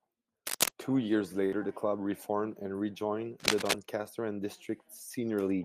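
From 0.47 to 0.72 s, and again from 3.40 to 3.73 s, cable scratch noise appears: dense, ragged crackling about 5 dB louder than the speech, likely from a worn connector being moved. The speech continues underneath, which separates it from a dropout.

At 1.45 to 1.59 s, a burst of packet loss occurs. The last sound is stretched for about 65 ms and fades away, then speech resumes with roughly 60 ms skipped. Nothing plays over the speech; the speech itself is replaced.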